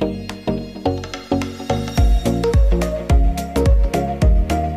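Right from the start and all the way through, there's grainy distortion that tracks the sound, with quiet passages turning gritty and sputtery. That's likely low bit depth without dither, about 9 bits and truncated, leaving the error around 45 dB below the signal.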